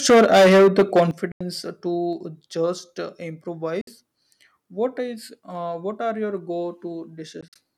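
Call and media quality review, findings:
Microphone overload, 0.09–1.03 s: harsh crackle on loud peaks, driven about 11 dB past full scale, with roughly a third of samples flattened. Likely input gain set too high at the converter.

Microphone volume stepped down at 0.1 s (about −3 dB), 1.11 s (about −10 dB) and 2.13 s (about −3 dB): abrupt level drops in voice and background. Likely call software cutting input gain after clipping.

Bluetooth dropout at 1.32–1.41 s (87 ms), 3.81–3.87 s (58 ms) and 7.41–7.57 s (scattered gaps, longest 44 ms): silences, and audio resumes as if it had kept playing. Likely late packets dropped on the wireless link.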